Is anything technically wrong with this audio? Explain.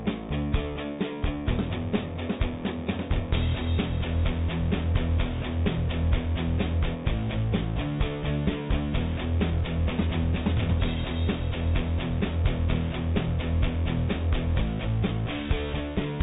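No, nothing here is technically wrong: the audio has passed through a WebRTC call path whose narrowband coding, consistent with G.711 A-law, leaves nothing above 4 kHz, as is normal for that kind of call.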